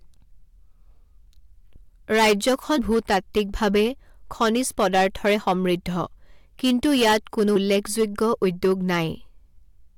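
Hard clipping runs through the whole speech clip. The signal is driven about 16 dB past what one stage can pass, so its peaks are sliced flat. Only a small share of samples, a few percent, hit the ceiling. Those flat tops add harsh high harmonics. The result is a rasping fuzz on every loud syllable, not just an occasional crackle.

Compressed frames are skipped at 1.75 s, 2.77 s and 7.55 s. At each point the decoder plays nothing for a stretch of coded audio, and the speech jumps ahead. The first jump loses roughly 200 ms, the second about 100 ms, the third about 70 ms. The jump sizes fit a frame length of about 21 ms.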